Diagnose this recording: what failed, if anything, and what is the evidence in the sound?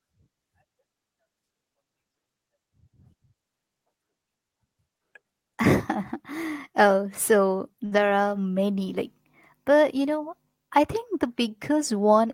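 A short stall from a late packet at 7.85 to 8.01 s: a network packet arrived late, the jitter buffer ran dry, and the receiver held the sound for about 58 ms before resuming without loss.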